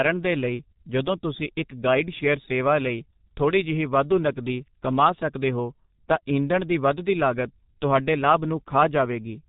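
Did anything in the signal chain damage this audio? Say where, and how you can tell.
Yes. From start to finish the speech sounds muffled and hoarse, with consonants smeared together and nothing audible above 3.8 kHz. That points to the codec stage, specifically G.723.1 codec damage, which is heavy here. The codec works in 30 ms frames and refreshes its model of the voice only slowly, so quick transitions blur. The thin, rough texture fits a bitrate of around 6 kbit/s.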